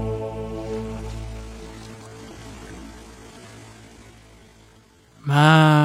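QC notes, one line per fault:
1.17–5.84 s: time-stretched section. At 1.17 s the pace abruptly drops to about 0.57 times normal, while the pitch stays the same. The audio drags. Software likely lengthened this part by repeating short pieces to keep pitch.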